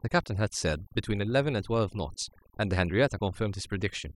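Mains hum runs through the whole speech clip. A steady 50 Hz tone sits roughly 20 dB below the voice. Power-line interference has leaked into the signal path. Overdone noise removal is also present throughout. Bands near the noise floor are cut hard, leaving twinkling specks in the gaps.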